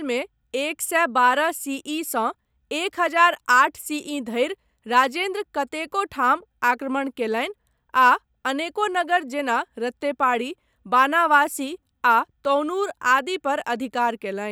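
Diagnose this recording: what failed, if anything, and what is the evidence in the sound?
Nothing stood out on listening to this speech recording; no failure at any stage could be heard.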